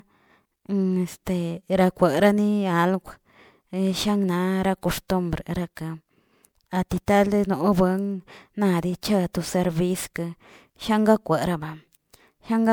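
Speech with generation loss throughout. It sounds swirly and hollow, with smeared attacks and nothing above 20.8 kHz. That likely comes from about three passes of MP3, fitting 128 kbit/s.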